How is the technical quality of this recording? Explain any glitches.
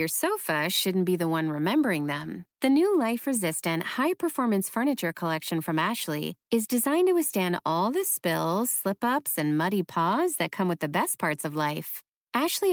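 No glitches or technical faults are audible anywhere in the recording.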